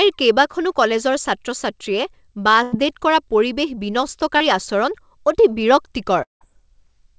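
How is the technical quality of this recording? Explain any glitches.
The recording carries three network glitches in a speech call whose audio stops at 8 kHz, as a wideband call codec would.

Burst of packet loss, 2.63 to 2.75 s. Several packets in a row failed to arrive in time. The receiver stretched the last sound for about 90 ms, fading it. You hear a brief held buzz or hiss. Speech then resumes with roughly 90 ms skipped.

Short concealed packet loss, 4.37 to 4.43 s. About 30 ms never reached the decoder. The receiver filled the hole by extending the preceding sound, then blended back. It comes across as a quick smear or wobble. A short consonant may drop out.

Long network dropout, 6.23 to 6.44 s. The audio continues as a fading buzz or hiss for about 180 ms. About 150 ms of that is silence. It comes back with about 180 ms of speech gone. The likely cause is a stretch where no packets arrived.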